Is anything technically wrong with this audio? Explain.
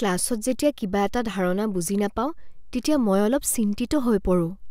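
No, nothing technically wrong turns up here; it's just a short bit of speech that sounds perfectly fine all the way through.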